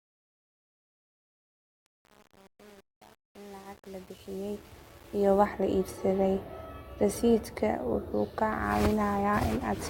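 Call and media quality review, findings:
Gritty, stepped sound through the fade, worst from 0.0 to 5.46 s. Truncation distortion on a fade: gain stage keeps about 7 bits, undithered, so low levels quantise into coarse square steps.

Sudden drop in quality with no gap at 6.09 s, lasting to the end: codec artefacts up. Adaptive stream switched to a lower-bitrate rendition, consistent with Opus stepping from 64 to 32 kbit/s.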